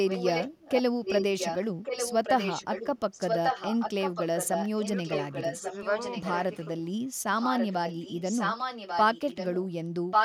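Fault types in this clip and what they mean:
Echo leak: a delayed copy of the speech comes back about 1.14 s after the original and sits a little below the direct speech. It runs at 0.05 to 0.82 s, 1.05 to 1.58 s, 1.83 to 6.67 s and 7.39 to 9.68 s, and again from 10.11 s to the end, where it's louder than the speech itself. The likely cause is a far-end loudspeaker whose echo canceller let the mic pickup through and sent it back.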